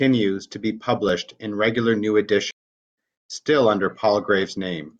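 At 1.09 s, between "to be" and "in regular new", an overlap between stream segments trims about 17 milliseconds of audio. It sounds like a tiny skip rather than a pause. From 2.51 to 2.98 s, after "in regular new", a playback stall brings about 0.47 s of dead silence, likely from the player running short of data. The audio then resumes at "still under".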